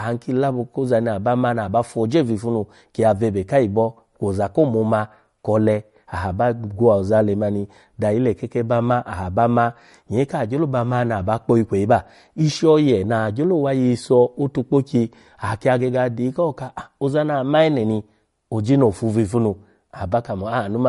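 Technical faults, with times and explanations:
Throughout, MP3 compression: likely a bit-starved encoder, fitting roughly 47 kbps, removes everything above 11.2 kHz and drops weak frequency lines, leaving dull, watery speech.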